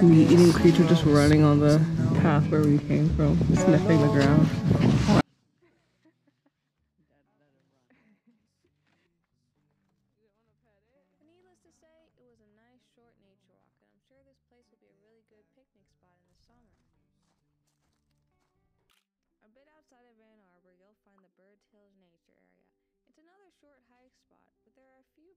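At 5.21 s the sound drops by about 48 dB in an instant and stays down to the end. This is a 24-bit alignment error that makes the audio too quiet. Samples held in the low 24 bits of a 32-bit word are being read as full 32-bit values. Each sample therefore loses a fixed factor of 256 in level. The sound stays clean and undistorted, but it becomes almost inaudible.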